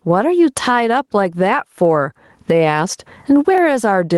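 Gain pumping runs through the whole of this speech recording: the level ducks by around 20 dB under each loud syllable. The likely cause is input gain set far too high, with a fast limiter clamping every peak and squashing the dynamics. Dropped samples show up at 3.58 s as a single sharp click. The waveform jumps abruptly to a later value, likely because a fraction of a millisecond of samples went missing, far too little to remove any audible sound.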